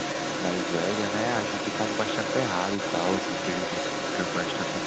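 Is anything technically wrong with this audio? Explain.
Yes. Throughout the clip, the channels drift apart: two devices on clocks differing by a few hundred parts per million let the inter-channel delay creep toward roughly 0.7 ms, so mono summing sweeps comb notches, heard as slow flanging.

From 0 to 4.86 s, the other side's voice leaks through, likely because an echo canceller left the far-end loudspeaker sound in the microphone, putting a second voice at about the same level as the speech.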